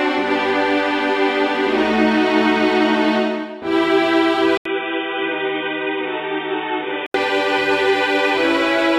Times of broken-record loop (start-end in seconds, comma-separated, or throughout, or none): none